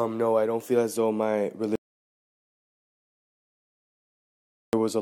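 At 1.75 s the sound cuts off abruptly into silence, with no room tone, until 4.73 s. This audio dropout to silence removes nearly 3 s of material, likely from the input being lost while the recorder kept writing silence.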